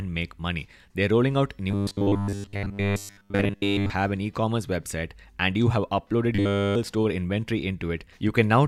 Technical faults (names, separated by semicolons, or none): robotic sound from repeated short buffers